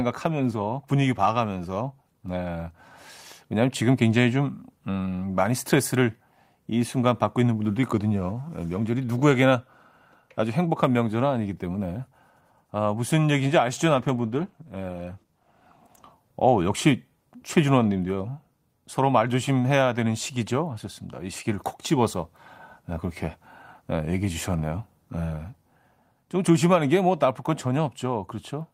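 From 13.92 to 16.21 s, a call bitrate drop starves the encoder, which fits a halved bitrate, so the speech turns coarser until it recovers.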